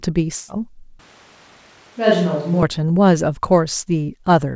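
A short speech recording carried over a call link, with its top end stopping at 8 kHz, which fits a wideband codec such as G.722. From 0.36 to 0.50 s there is a burst of packet loss. About 120 ms of audio goes missing. The receiver fills the gap by stretching the last sound and fading it, so it turns into a dying buzz or hiss. The speech then resumes further on. From 0.99 to 2.63 s the voice suddenly turns hollow and roomy. It drops about 5 dB, loses bass, and the room noise rises to roughly 30 dB below the speech. This is likely a switch to a distant microphone, with the close one dropping out and then returning.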